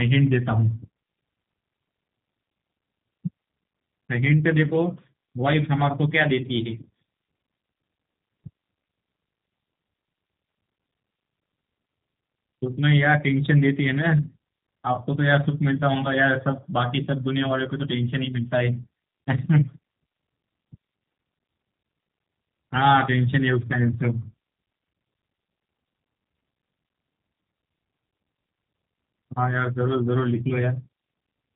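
From start to finish the speech carries the sound of the G.729 codec, plainly audible throughout. Each short frame is rebuilt from a vocal tract filter, a pitch predictor and a handful of pulses rather than the original waveform, so voicing sounds slightly rough and synthetic, which fits an 8 kbit/s setting. Nothing survives above 3.8 kHz. A simple low-pass filter would only dull the top end; here the buzzy, model-built texture reveals the codec.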